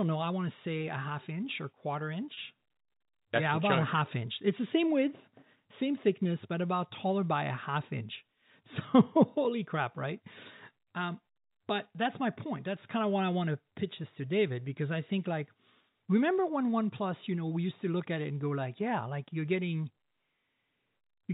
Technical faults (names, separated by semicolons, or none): packet loss with pitch repetition